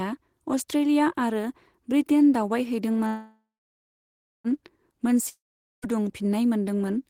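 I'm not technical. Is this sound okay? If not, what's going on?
No. There are two problems in this speech recording.

Call audio freeze, from 3.07 to 4.47 s: the voice stops for about 1.4 s. It starts with a short fading buzz, then about one second of silence. Then the speech carries on exactly where it left off, so nothing is lost, but everything after it comes about 1.4 s later than it should. The likely cause is that the call's data got held up in transit, so the receiving end ran out of sound to play and had to wait.

Long network dropout, from 5.29 to 5.85 s: another break, this one about half a second long, again a brief fade followed by about 0.45 s of silence. This time the speech does not pick up where it stopped. When it returns, it skips ahead, and roughly half a second of what was said is simply gone. The likely cause is that that stretch of audio never reached the listener at all.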